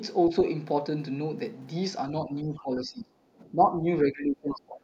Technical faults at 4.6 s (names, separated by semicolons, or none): speech suppressed in double talk